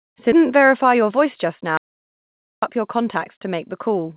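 At 0.32 s the speech jumps forward in a skip ahead. Roughly 400 ms of audio that was already queued was discarded, either in transit or when the jitter buffer overflowed, and playback resumes at 0.49 s. The two sides are joined almost directly, with no filled gap, so the listener hears an abrupt splice where a chunk of the utterance simply vanishes and the latency drops by about the same amount.

From 0.95 s to 1.44 s there is a jitter buffer speed-up. The buffer was holding more audio than its target, so the receiver trimmed many short pitch-period-length pieces in succession, removing around 50 ms in total. The speech runs at about 109% speed with its pitch unchanged. Over that half-second the delivery sounds slightly rushed and the rhythm of the speech is compressed.

At 1.77 s the speech cuts out mid-flow into an audio dropout to silence lasting about 0.85 s, until 2.62 s. The gap is silent, with no room tone, which points to the input being lost while the recorder kept writing samples. 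A likely cause is a momentary device disconnect, link failure or accidental mute. Whatever was spoken in that interval is absent, and the speech restarts abruptly.

Throughout, the audio is band-limited with no content above 4 kHz and carries the grainy companding noise of a narrowband telephone codec, which fits G.711 mu-law at 64 kbps on a WebRTC call path.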